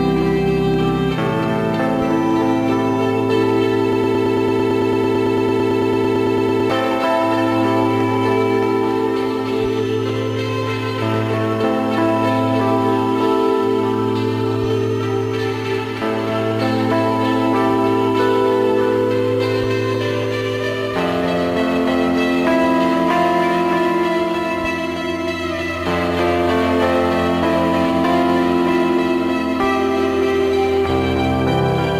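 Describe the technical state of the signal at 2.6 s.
At 2.6 s the signal is intact, with no dropout, clipping, glitch or other audible fault at that moment.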